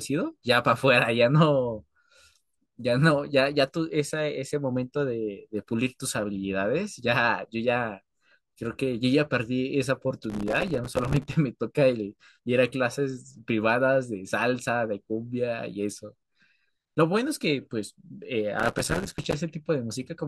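A gritty burst of crackle tears through the speech from 10.30 to 11.34 s, and again from 18.60 to 19.34 s. This is processor overload crackle: the system repeatedly failed to fill its small audio buffers on time, and each miss left a hard-edged gap of silence. The density of the tiny dropouts points to buffers of only a few milliseconds, missed around a hundred times per burst, which fuses into continuous grit until the load eases.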